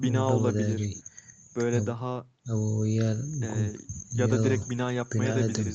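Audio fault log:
The speech shows the normal marks of a call's microphone processing and a WebRTC call path, with nothing above 8 kHz, which fits an Opus codec at an 8 kHz bandwidth and about 32 kbps, and no fault can be heard.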